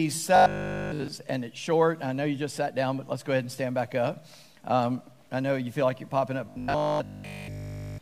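From 0.36 to 1.08 s, and again from 6.46 s to 8.00 s, the sound turns into a rigid, metallic buzz at 50 Hz: robotic sound from repeated short buffers. This is likely a playback path looping its last 20 ms chunk while fresh audio fails to arrive, so essentially all of each stretch is repetition. A spectrogram shows evenly spaced harmonic lines every 50 Hz, and the waveform shows one identical cycle repeating.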